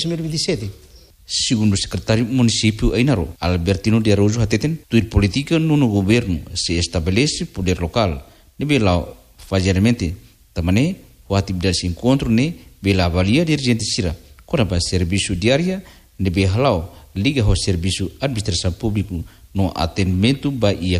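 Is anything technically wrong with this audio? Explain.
No, nothing is technically wrong with this audio.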